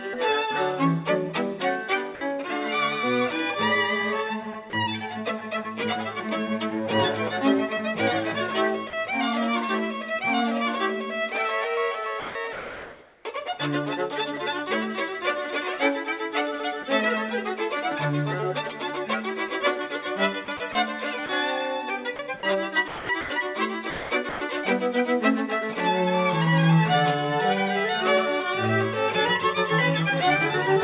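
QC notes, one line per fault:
2.15–2.21 s, 4.70–4.73 s and 8.90–8.93 s, sound dropped by the voice detector: the sound briefly gives way to steady synthetic noise for 60, 30 and 30 ms, then returns. The sender's detector likely judged those moments to be background and stopped transmitting, leaving the receiver to fill in with comfort noise.
12.20–13.25 s, 20.45–21.29 s and 22.16–24.41 s, sound chopped by the voice detector: the sound turns choppy. Comfort noise replaces about 870, 120 and 660 ms of these stretches, likely as the detector repeatedly toggles transmission on and off.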